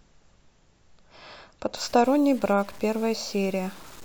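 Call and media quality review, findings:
Grainy, gritty distortion on speech from 1.77 s to end, tracking the signal; quietest passages sputter or drop out. Likely low bit depth without dither: samples truncated to 7 bits, error following signal, about 25 dB below it.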